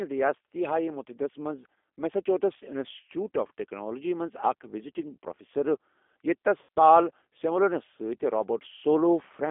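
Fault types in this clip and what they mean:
G.729 codec: An 8 kbit/s speech codec rebuilds the speech from a vocal tract filter, pitch predictor and a few pulses per frame, giving a plainly rough, synthetic quality. A spectrogram shows energy confined to roughly 250 Hz to 3.5 kHz, with smeared, blocky harmonics.
VoIP packet loss concealed by the speech codec: At 6.63 to 6.69 s, about 60 ms of audio is missing, which fits two lost packets. The decoder extends the last pitch and filter into a buzzy tone or coloured noise that fades, visible as stretched energy and a sagging waveform envelope.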